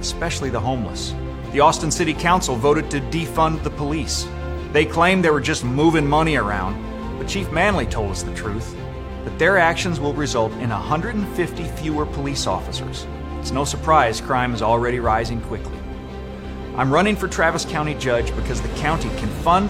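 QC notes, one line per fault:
No faults found anywhere in the clip; nothing to log.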